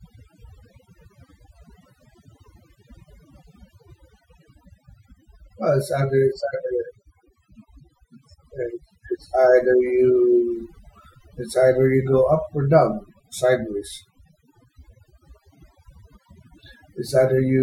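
From start to finish the speech carries overdone noise removal: a noise reducer pushed too hard has cut individual frequency bands to near nothing wherever they sat close to its noise estimate, taking the softer parts of the voice with them. The background drops and breaks up into twinkling specks. On a spectrogram the gaps between phrases look almost black, scattered with isolated bright dots.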